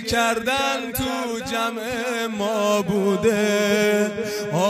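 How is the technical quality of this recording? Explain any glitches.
No audible glitches or faults.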